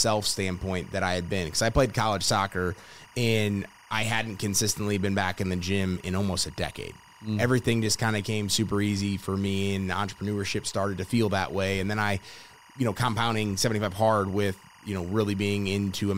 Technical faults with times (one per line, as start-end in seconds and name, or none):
0.00-16.18 timecode bleed